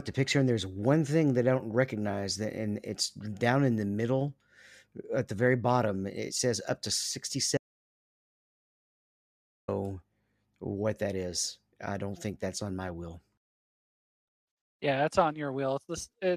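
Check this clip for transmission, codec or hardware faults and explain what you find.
One fault: an audio dropout to silence from 7.57 s to 9.68 s. The speech cuts off abruptly. About 2.1 s is lost, with no room tone. The input was likely lost through a disconnected device, failed link or stray mute, while recording continued.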